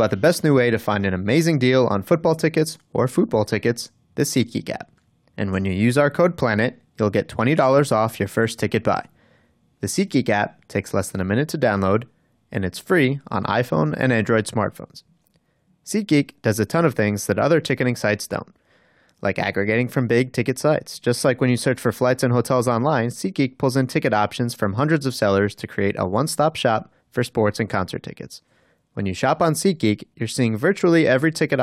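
Speech recording with no audible technical faults.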